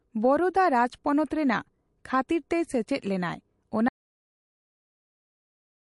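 A speech recording carrying plainly audible MP3 compression damage throughout: nothing is present above 11.3 kHz, and the sound has a watery, swirling quality with smeared consonant attacks, which likely comes from encoding at a low bitrate around 48 kbps, where weak spectral lines are dropped frame by frame. At 3.89 s the audio drops out to silence and stays there to the end of the clip, a silent gap with no room tone, most likely lost input while the recorder kept writing.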